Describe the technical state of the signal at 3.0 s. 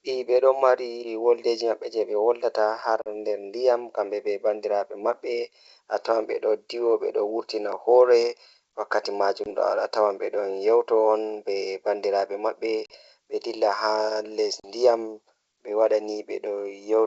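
Packet loss on an ADPCM call strikes at 3.02 to 3.09 s. About 40 ms of speech, roughly two packets, drops out as a hard-edged silent gap. The G.722 decoder's predictor and step size then drift from the sender's. Speech returns with brief distortion.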